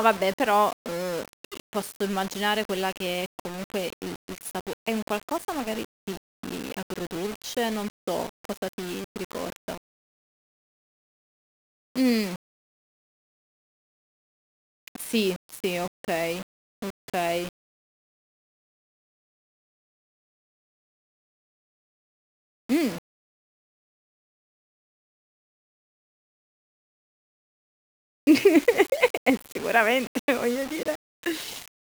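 From start to finish the speech carries a grainy, gritty distortion that moves with the signal, with quiet passages sputtering or dropping out. That's low bit depth without dither, likely rounding to around 5 bits, which leaves error only about 20 dB down.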